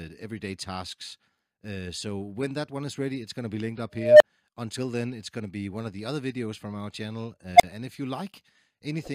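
A recursive filter in the processing chain became unstable, its feedback running away so the output grew without bound. In this audio that surfaces twice as an unstable filter: a tone of around 700 Hz swells from 3.96 to 4.23 s over about 245 ms, clips, then drops to a 30 ms silence, and again from 7.56 to 7.63 s, building in only 38 ms before a 35 ms gap as the filter resets.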